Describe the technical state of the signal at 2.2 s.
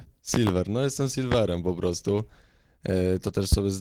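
At 2.2 s the speech runs through intact, with no technical fault audible at that moment.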